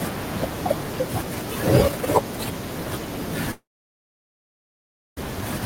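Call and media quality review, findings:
Long network dropout, 3.51–5.18 s: speech cuts out, last sound smeared into a short fading buzz, then about 1.55 s of silence. Likely packet loss with receiver concealment giving up; roughly 1.7 s of speech never recovered, resumes past the gap.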